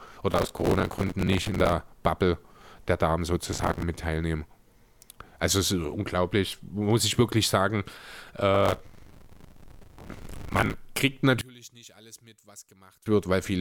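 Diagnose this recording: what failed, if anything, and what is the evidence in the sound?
Gritty crackle tears through the speech at 0.32–1.73, 3.52–3.83 and 8.55–10.74 s. This is processor overload crackle: driver buffers of roughly 5 ms miss their deadlines and replay old audio.

From 11.41 to 13.06 s the speech sinks by about 26 dB to a faint residue, likely one channel inverted in the wiring, cancelling in the mono sum.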